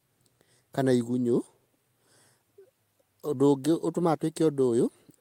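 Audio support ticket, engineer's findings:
No faults found on listening; the speech passes with no dropouts, distortion, glitches or level problems to report.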